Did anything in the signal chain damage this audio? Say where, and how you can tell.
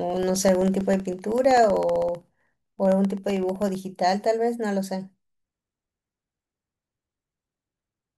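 Yes. From 0.10 s to 3.75 s the speech carries a steady run of small ticks every 64 ms. These are periodic USB or driver dropouts at the driver/buffer stage: something stalls the USB bus or audio driver on a fixed cycle, and each time roughly a millisecond of audio is lost and replaced by silence.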